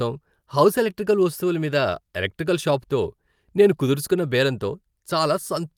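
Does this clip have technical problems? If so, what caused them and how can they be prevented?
No, there are no faults.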